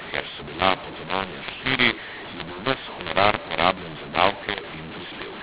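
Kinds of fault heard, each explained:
mu-law and A-law mixed up: The speech was coded with G.711 A-law but decoded as mu-law, so each 8-bit code maps onto the wrong point of the logarithmic curve. Sample levels come out scrambled, some too loud and some too soft, and the quietest codes land well above silence. Across the whole clip the speech sounds harsh and distorted, pauses carry a noise floor instead of quiet, and the 4 kHz telephone band limit still shows underneath.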